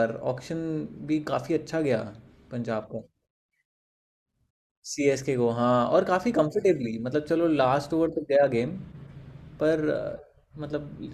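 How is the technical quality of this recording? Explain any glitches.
No glitches can be heard anywhere in this recording.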